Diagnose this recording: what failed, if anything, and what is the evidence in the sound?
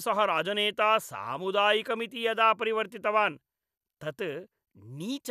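Nothing failed here: I can't hear anything going wrong anywhere in the chain on this bit of speech, so there's no fault to diagnose.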